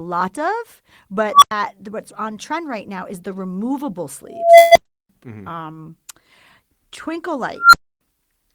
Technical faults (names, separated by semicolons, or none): unstable filter; call audio freeze; short stall from a late packet